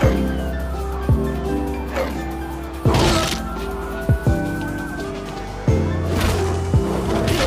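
No technical faults can be heard anywhere in the clip.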